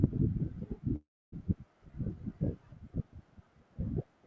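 At 0.96 s packets were likely held up in transit, emptying the jitter buffer and causing a call audio freeze. Until 1.34 s the receiver stretches the last sound into a fading buzz or hiss, then 270 ms of silence. The speech resumes where it stopped, with nothing lost, but runs 363 ms late.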